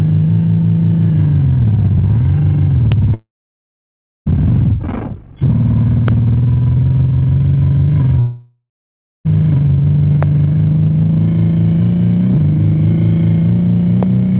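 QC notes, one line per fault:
2.92 s, 6.08 s, 10.23 s, 14.03 s: loud pop. Each is a single sharp pulse peaking about 10 dB above the surrounding sound, which carries on underneath. Likely a voltage step from a plug, switch, static or driver glitch, shaped by the downstream circuitry into a brief click-thump.
3.14–4.28 s and 8.20–9.27 s: long network dropout. The receiver extends the last received sound as a decaying buzz/hiss, then leaves silence: about 0.99 s of it in the first gap and 0.60 s in the second. Audio resumes with roughly 1.1 s missing each time, likely from packets never arriving over the 4 kHz-limited G.711 call path.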